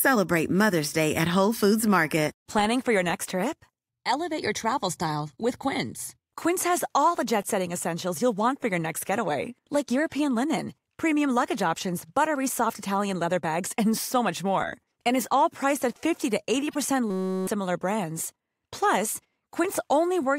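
At 16.71 to 16.76 s, a corrupt frame decoded: damaged bits in a few frames put energy at wrong frequencies. It sounds like a brief glitch. The same happens at 18.17 s, in a single frame.

At 17.10 to 17.47 s, a system hang loop replays one 5.33 ms slice. This fits a 256-sample buffer. It is a steady 188 Hz buzz, and roughly 0.4 s of sound is lost.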